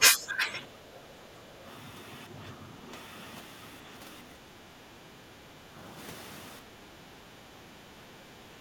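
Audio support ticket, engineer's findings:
Speech dipping and breaking up in pieces, roughly 10 to 15 dB down, deepest at the start, at 0.0–0.62, 0.9–1.18, 5.18–5.68, 7.11–7.16 and 8.3–8.35 s. Speech suppressed in double talk, likely: the echo canceller cannot separate near talker from far-end echo while both speak, so it attenuates both.

Room sound ducking about 6 dB for a moment, then recovering, at 1.47–1.61 and 6.62–6.76 s. Background gated by the echo canceller: the loudspeaker is playing, so the canceller clamps the microphone hard and releases once the far end stops.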